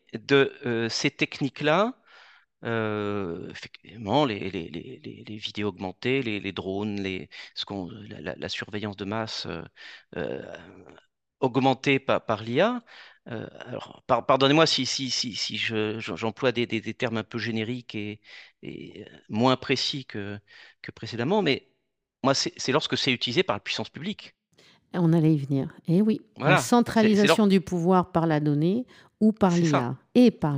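Right from the start and all the way through, this speech carries imaging from linear upsampling. It sounds like it was brought up from around 24 kHz to 48 kHz by just joining neighbouring samples with straight lines, which filters poorly. So the top end feels a bit dulled, and a faint mirrored copy of the spectrum sits in the 12 to 24 kHz range, roughly 30 dB down. You catch it as a light metallic shimmer riding on the sibilants.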